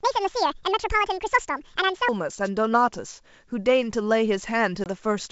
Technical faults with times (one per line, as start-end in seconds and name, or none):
0.00-2.08 section at the wrong speed
2.43-2.50 wireless microphone noise hit
4.84-4.90 packet loss on an ADPCM call